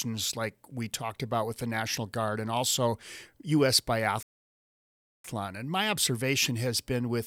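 A speech clip with a playback stall from 4.23 to 5.25 s: the sound cuts out mid-flow for about 1.0 s, showing as a flat, empty waveform and a blank vertical band on the spectrogram. The likely cause is the player running dry of data or blocking its output thread.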